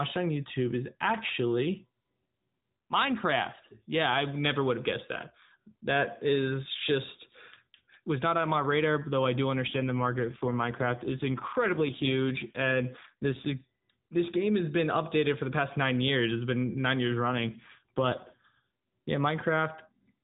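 Speech over an AMR narrowband mobile link shows two AMR rate drops, at 9.68–13.66 s and 17.28–18.40 s. The voice turns rougher and buzzier, consistent with a fall from 12.2 to 5.9 kbps, with no gap or band change.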